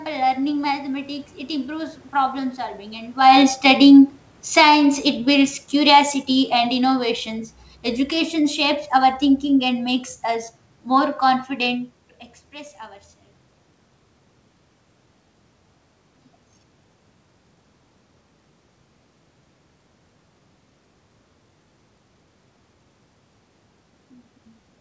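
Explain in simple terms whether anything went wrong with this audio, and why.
Automatic gain falling from 3.61 to 4.77 s: the level control judged the input too loud or its background noise too strong and eased it down, so the speech and the room noise sank together.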